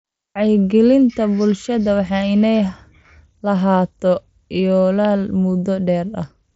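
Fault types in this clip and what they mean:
Nothing to flag here: the speech arrives over a Bluetooth headset link whose top end stops around 7.7 kHz, which is just how that link carries sound.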